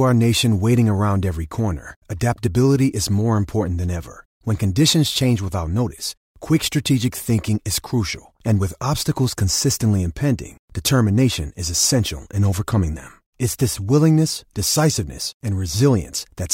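No technical faults can be heard anywhere in this speech recording. There is no moment that calls for a timestamp or closer attention.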